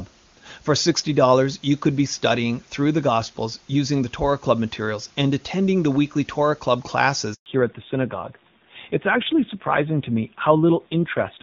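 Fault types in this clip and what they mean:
Handover gap: at 7.34 s the call switches networks and no speech frames arrive, leaving 120 ms of silence before the new link begins.
Fallback to narrowband: from 7.46 s the call leaves HD Voice for a narrowband codec, so nothing above 4 kHz survives and the speech sounds duller, rougher.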